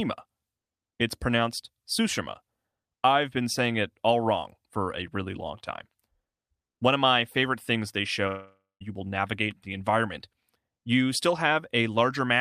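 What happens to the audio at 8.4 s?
Right around there, from 8.27 to 8.83 s, the speech drops out. That's likely a long network dropout. The last sound gets smeared into a fading buzz, falls to silence for about 0.19 s, then the speech resumes with roughly half a second missing.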